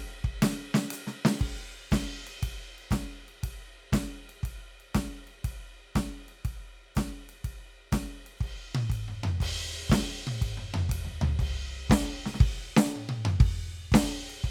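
Music, with no technical faults heard anywhere in the clip.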